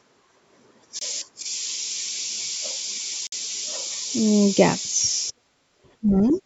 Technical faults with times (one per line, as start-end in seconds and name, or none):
0.99-1.01 Bluetooth stall
3.27-3.32 Bluetooth stall
5.31-6.42 speech suppressed in double talk
6.28-6.34 other side's voice leaking through